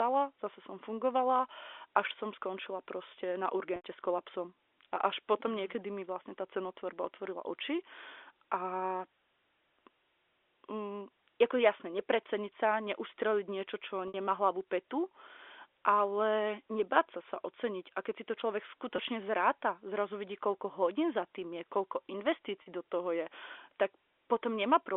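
Speech over a G.711 telephone line, band-limited to 300 Hz–3.5 kHz, breaks up four times from packet loss with pitch repetition. The gaps fall at 3.76–3.83 s, between "som skončila proste na" and "s kolapsom", at 14.08–14.14 s before "hlavu petu", at 18.96–18.98 s, and at 22.62–22.66 s. They last 80, 60, 20 and 40 ms, which fits 20 ms packets. The receiver fills each gap by repeating the last pitch period. This gives a brief held, buzzy tone before the speech resumes.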